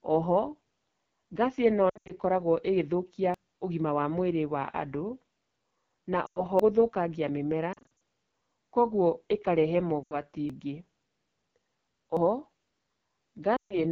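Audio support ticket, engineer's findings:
AMR wideband (HD Voice) codec, throughout: rough, raspy speech from a low-rate mode, consistent with 8.85 kbit/s. Spectrogram shows smeared harmonics below 6.4 kHz and a noise band from 6.4 to 7 kHz with no harmonic structure.

Lost AMR speech frames at 1.89–2.12 s, 6.26–6.44 s, 7.73–7.86 s, 10.03–10.15 s and 13.57–13.79 s: brief warbles and syllables fading to near silence. Radio errors forced the decoder to repeat the last pitch and vocal tract settings at falling gain. Waveform shows decaying envelopes. Spectrogram shows frozen harmonics. The 1.89 s and 7.73 s events are scattered hits rather than one run.

Dropped buffer (overrun) at 3.34, 6.60, 10.50 and 12.17 s: abrupt skip with no gap. Likely the capture buffer was overwritten before it was read, losing roughly 0.1–0.3 s each. Waveform shows a hard discontinuity, and the spectrogram a vertical broadband line.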